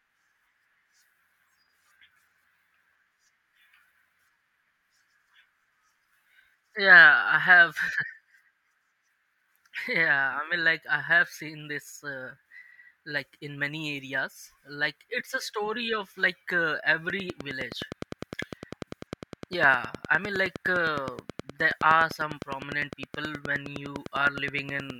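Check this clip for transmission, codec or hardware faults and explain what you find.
One fault appears: a train of clicks from 17.1 s to 24.9 s, about seventy evenly spaced clicks at 9.7 per second, likely interference from nearby equipment or a faulty connection or power supply. They tick steadily over the speech and pauses, peaking slightly above it, and show as regular vertical broadband lines on a spectrogram and sharp spikes on the waveform.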